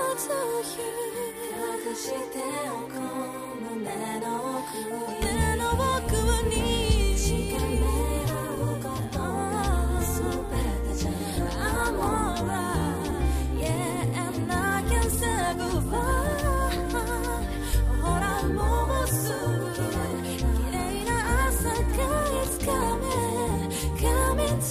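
At 13.10, 17.72 and 20.11 s the audio jumps ahead by roughly 70, 50 and 50 ms: compressed frames skipped, a few frames each, fitting a frame length near 23 ms.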